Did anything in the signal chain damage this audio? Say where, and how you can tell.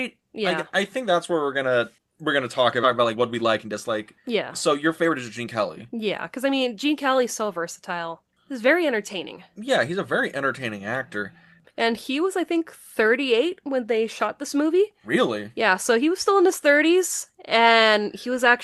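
Yes. Right after "gonna we're gonna talk", at 2.83 s, the speech jumps forward with no gap. This skip ahead in the network or jitter buffer discarded about a second of audio.

The speech then sounds hurried at unchanged pitch, 119% speed from 2.87 to 3.75 s and 106% from 4.28 to 10.20 s, before "entertaining actor". This is jitter buffer speed-up: the buffer trimmed pitch periods to shed excess delay.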